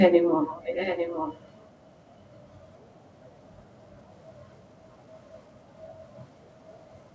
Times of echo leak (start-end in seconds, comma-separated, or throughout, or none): 0.47-1.47